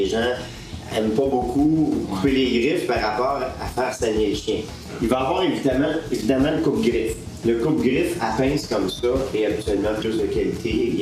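Nothing here sounds wrong: the audio runs its whole course without a single technical hiccup worth pointing out.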